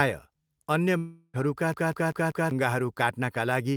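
A speech clip with two breaks in it. From 0.97 to 1.36 s the sound smears into a fading buzz, dips briefly to silence, and then resumes further on with about 0.36 s missing, likely a long network dropout where the receiver stretched the last sound to cover the gap. Then, from 1.74 to 2.51 s, the same fragment of about 0.19 s plays four times in a quick, even stutter with a tiny mute at each jump. This is a CD stuck on one turn: a scratch knocks the laser back one track at the same point on every rotation.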